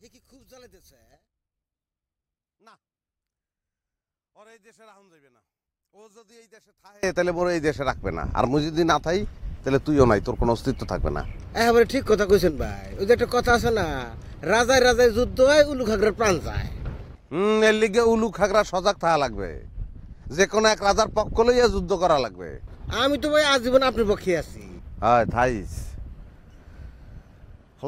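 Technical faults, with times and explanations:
0.0–7.03 s, one channel inverted: for the first seven seconds, anything sitting in the centre of the stereo image collapses when the channels are summed, dropping by about 34 dB and leaving only a faint residue of whatever differs between left and right. This is likely caused by reversed polarity on one channel, so identical content in both sides cancels in the mono sum. Centred material suffers most, since it is nearly identical in each channel.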